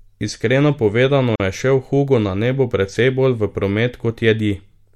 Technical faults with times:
1.36-1.40 gap at a join of encoded pieces

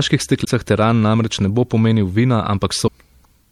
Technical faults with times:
0.00-3.52 MP3 compression
0.43-0.48 damaged data in a compressed stream
2.84-2.88 damaged data in a compressed stream

